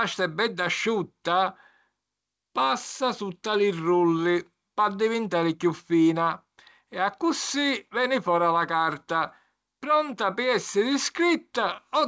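Speech comes through a wideband call path whose audio stops at 8 kHz, consistent with a G.722 codec, and no technical fault can be heard anywhere in it.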